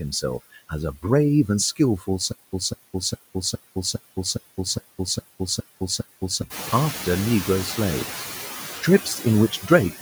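A speech recording with two problems. From start to finish there's noise suppressor artifacts: the processing pulls the steady background down by about 15 dB, frame by frame, so the noise sinks in the pauses and swells back up under the talking. This stands out more once the room noise rises by about 11 dB around 6.5 s, where it sits only about 10 dB under the speech. Then from 2.32 s to 6.42 s there's a stutter with silent gaps: a roughly 203 ms fragment plays, then about 207 ms of dead digital silence, repeating every 410 ms or so, ten times over. That's most likely the player or stream stalling and replaying its last chunk on each retry, and whatever should have played during those four seconds is simply gone.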